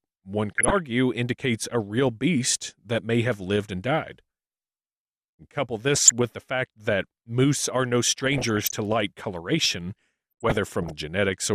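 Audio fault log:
0.58–0.78 s, 5.95–6.11 s, 8.17–8.76 s and 10.32–10.92 s, DAB burbling: bursts of noise blips over the speech. The later two last about 0.6 s each, and the third ends just before "light coloration". Weak reception lets bit errors, a fraction of a percent, slip past the error correction into the MP2 audio data. Corrupted samples then put short noise blips in single sub-bands, and corrupted scale factors make sub-bands jump in level for up to a frame.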